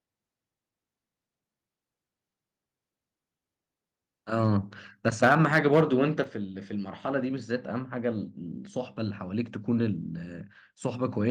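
From 5.06 to 5.81 s the loudest speech peaks turn harsh and crackly, their tops flattened by microphone overload. The signal runs about 7 dB past the converter's limit, so a few percent of samples are cut off, likely because the input volume was set too high. Inside that stretch, at 5.25 s, the voice and the background drop together by about 3 dB, and at 6.24 s they drop again by about 6 dB. These are sudden level steps from the microphone volume being stepped down, likely call software reacting to the clipping by lowering the device's input volume.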